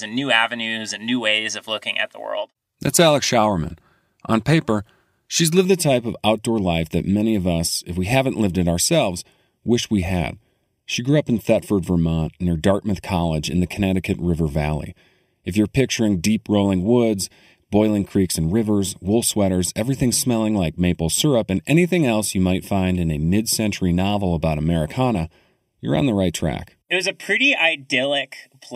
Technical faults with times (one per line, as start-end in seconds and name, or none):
5.65-28.76 channel delay (comb filtering)